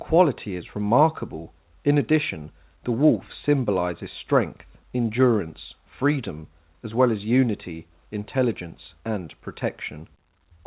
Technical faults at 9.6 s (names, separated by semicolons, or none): none